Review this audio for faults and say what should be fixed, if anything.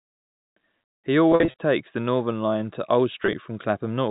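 Two stretches of the speech sound briefly buzzy and held, as if a syllable sticks: from 1.32 to 1.54 s, just before "take the", and again from 3.23 to 3.33 s. This is packet loss with pitch repetition. About 150 ms of audio went missing in gaps spread over 240 ms, with the longest run being 50 ms. The receiver filled each gap by repeating the last pitch period and fading it out. The second stretch lost about 40 ms across 100 ms, with runs of up to 20 ms. The G.711 telephone band itself comes through intact. To prevent this, give the link more network headroom and a larger jitter buffer, or add forward error correction.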